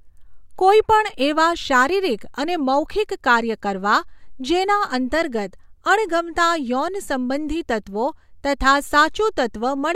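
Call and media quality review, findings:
No audible faults found.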